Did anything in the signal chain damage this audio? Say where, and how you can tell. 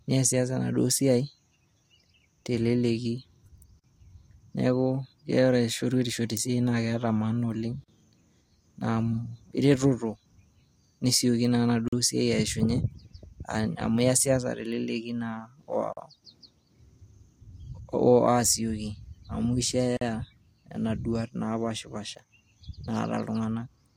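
Yes. There is a gap between chunks at the storage or playback stage. The audio was handled in 4-second chunks, and each join leaves about 44 ms of silence, at 3.79, 7.84, 11.88, 15.93 and 19.97 s. That spacing matches the chunk length plus the gap. The cause is likely either padding added by the codec at each chunk boundary or a player that starts each new chunk late. Nothing is dropped, but the speech stops briefly at each join, giving short, evenly spaced holes.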